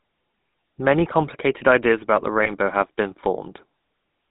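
A speech clip passed through the GSM full-rate codec. The band runs from about 150 Hz to 3.7 kHz, and the voice has a plainly audible buzzy, gravelly roughness, which fits 13 kbps full-rate coding. Lost GSM frames occur from 2.44 to 2.50 s. The codec holds the last good frame, so the sound briefly rings in a rough, metallic way, which fits a single lost 20 ms frame.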